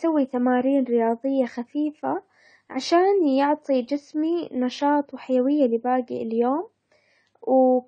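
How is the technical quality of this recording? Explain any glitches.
The quality is noticeably degraded by lossy compression throughout the speech.

AAC compression damage runs across the whole clip. Nothing is present above 9 kHz, so the top end sounds dull and muffled. The cause is likely AAC-LC encoding at a low bitrate, which fits about 32 kbps. Too few bits are available per frame, so the encoder drops the highest band and quantises the rest coarsely. Sibilants turn fizzy and smeared. Sustained sounds take on a warble.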